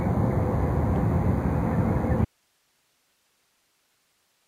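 From the very start there's a DECT cordless phone buzz: a thin, steady 100 Hz buzz full of harmonics, sitting about 35 dB under the sound. That's a nearby DECT handset or base firing radio bursts every 10 ms, which the audio circuitry rectifies into the signal path.

At 2.25 s the sound drops out abruptly and never returns before the end. What's left is just hiss, roughly 45 dB down. This is an audio dropout to a faint residue, likely the signal feed being lost while the downstream path stayed live.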